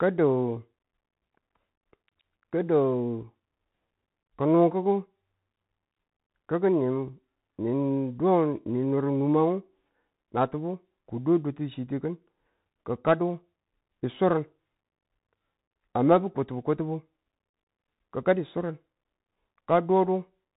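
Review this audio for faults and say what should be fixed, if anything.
The speech went through a Bluetooth CVSD headset codec for its whole length. CVSD sends one up-or-down bit per sample and adapts its step size, which fits a 64 kbps stream. That narrowband path removes everything above 4 kHz, so the speech sounds dull and boxed in. Loud, bright moments outrun the step and distort, s sounds come out scratchy, and a plainly audible granular hiss sits beneath the speech throughout. To prevent it, record through a wired microphone or a Bluetooth link running a wideband codec such as mSBC or LC3 instead of the CVSD headset profile.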